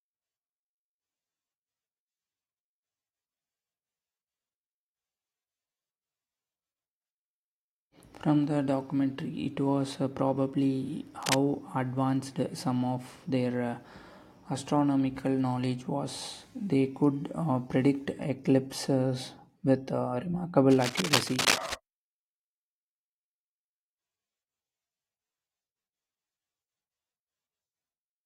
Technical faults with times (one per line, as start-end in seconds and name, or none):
11.21-11.36 cable scratch noise
20.71-21.74 cable scratch noise